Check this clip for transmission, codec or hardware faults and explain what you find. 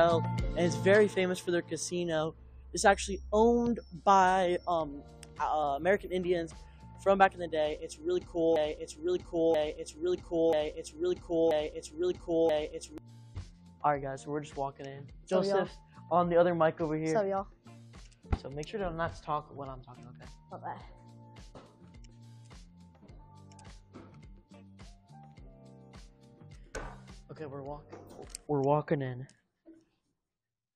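One fault stands out: a broken-record loop from 8.56 to 12.98 s. The player, encoder or stream likely stalled and kept resending the last fragment it held, so a 0.98 s piece of sound plays four times back to back, and whatever should have played in that span is lost.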